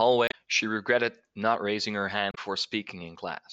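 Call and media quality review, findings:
Damaged data in a compressed stream, 0.25–0.34 s and 2.31–2.38 s: brief glitches in the speech. Corrupted bytes in the encoded stream; the decoder misreads those frames, loses sync and hunts for the next valid frame header before clean decoding resumes.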